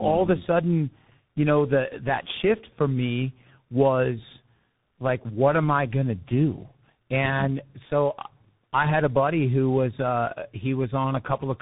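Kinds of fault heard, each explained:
Tandem speech coding: the speech was decoded and re-encoded across links, with a low-rate coder like G.723.1 feeding a CVSD stage, so each pass roughened the last one's output. It sounds muffled and warbly, and a spectrogram shows a hard ceiling at 3.8 kHz with smeared harmonics.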